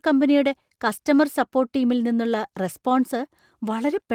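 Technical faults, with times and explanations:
No technical faults are heard in this speech.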